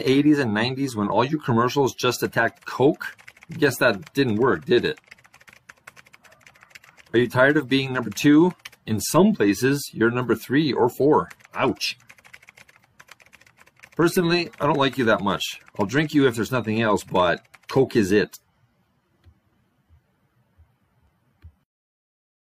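At 9.13 s and again at 21.07 s there's an overlap between stream segments: about 30 to 40 ms of sound gets trimmed away each time, so the waveform jumps with a small skip.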